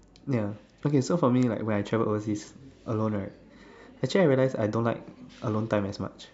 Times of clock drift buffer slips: none

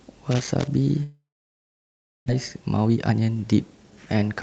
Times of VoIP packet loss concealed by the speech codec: none

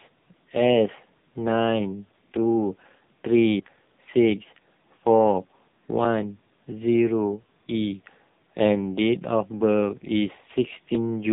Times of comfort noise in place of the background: none

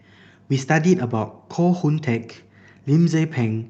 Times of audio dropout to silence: none

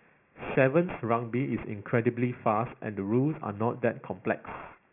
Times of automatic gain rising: none

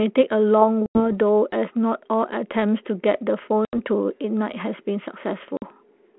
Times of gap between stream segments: none

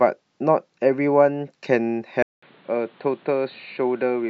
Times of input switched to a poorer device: 2.22-4.29

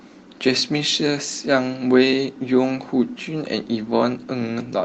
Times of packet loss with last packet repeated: none

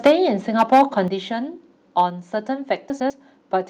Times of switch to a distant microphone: none

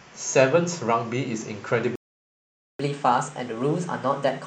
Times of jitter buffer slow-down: none

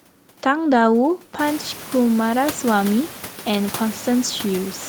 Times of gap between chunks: none

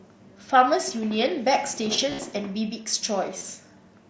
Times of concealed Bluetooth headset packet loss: 2.10-2.19, 3.38-3.41

